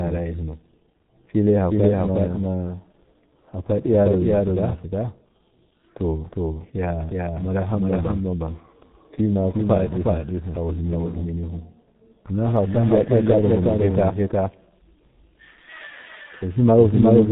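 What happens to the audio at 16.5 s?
At 16.5 s the clip carries a doubled audio track: a second full-band copy of the speech trails by roughly 0.4 s at about the same level, with no decay or room colouring. It likely comes from a second, slower capture path or two misaligned copies in an edit, and it runs through the whole clip.

The same moment shows G.723.1 codec damage, present throughout. Nothing passes above 3.9 kHz, and the coarse 30 ms frames with a slowly updated voice model leave the speech muffled and hoarse, with smeared consonants. The heavy damage fits a rate near 6.3 kbit/s.

Clock slip clicks also fall here, within the series running from 0.12 s to 17.26 s. Faint ticks recur about every 0.2 s. Each is a single sample dropped or repeated, likely because two unsynchronised clocks differ by roughly 100 ppm, and they stand out most on loud, sustained sound.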